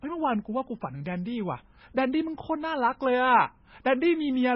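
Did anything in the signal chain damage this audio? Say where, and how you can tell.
Yes, at the codec stage, throughout the speech. Nothing sounds above 5.6 kHz, and there is heavy watery swirl with metallic chirps on s sounds. This is likely MP3 compression at a bitrate near 16 kbps. Unlike a plain low-pass filter, weak bands flicker on and off.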